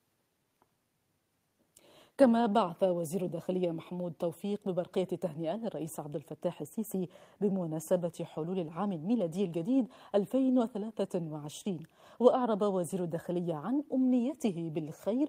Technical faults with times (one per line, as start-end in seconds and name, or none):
none